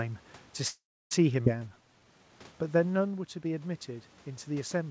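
From 0.68 to 1.13 s there is a call audio freeze: packets were likely delayed and the jitter buffer ran dry, so the last sound trails off into about 300 ms of silence before speech resumes.

At 1.45 to 1.48 s, a skip ahead drops roughly a tenth of a second of speech. Playback jumps forward, joining the two sides almost directly.

From 1.62 to 2.29 s, a jitter buffer slow-down repeats pitch periods to rebuild its reserve. This adds 110 ms and plays speech at 85% speed, drawn out at unchanged pitch.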